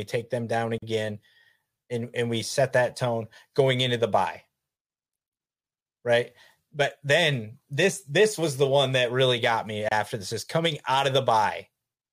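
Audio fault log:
0.78–0.82 s and 9.89–9.91 s, gap at a join of encoded pieces: speech breaks with a gap of 42 ms after "take them down" and 29 ms between "that really got me" and "this is coming out", then resumes where it stopped. Separately encoded pieces were joined untrimmed, leaving encoder start-up silence and last-frame padding.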